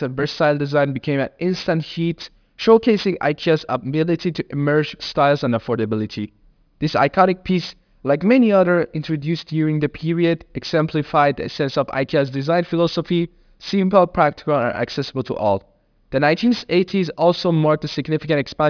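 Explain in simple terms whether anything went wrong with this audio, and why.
Yes, something went wrong: aliasing, all the way through the speech. The audio sounds squeezed down to about an 11 kHz sample rate without filtering first, so sound above 5.5 kHz folds back as wrong pitches. S and sh sounds come out gritty and metallic.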